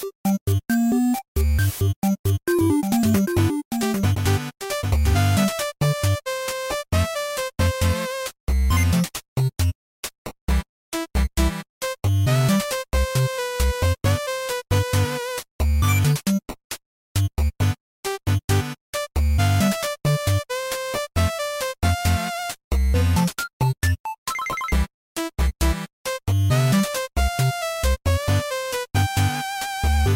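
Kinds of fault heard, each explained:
Doubled audio track: between 2.59 s and 5.31 s a second full-band copy of the sound trails the original by roughly 0.7 s, about 5 dB quieter, with no decay or room colour. It starts and stops abruptly, likely from a slower duplicate capture path.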